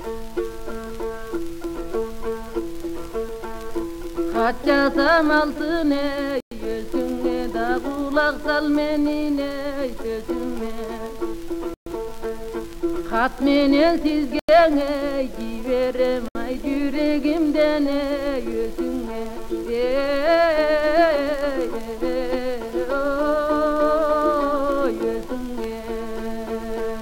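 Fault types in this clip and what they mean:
Bluetooth stall: four brief dropouts to dead silence, at 6.40, 11.74, 14.39 and 16.28 s, lasting roughly 0.07 to 0.12 s each, with the sound resuming right after. That's likely a wireless link briefly starving the headphone buffer until delayed packets got through.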